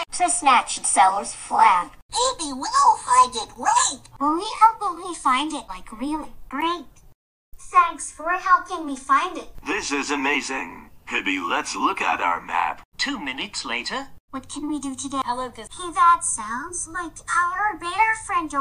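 No technical faults can be heard anywhere in this recording. The sound runs without any break, dropout or disturbance.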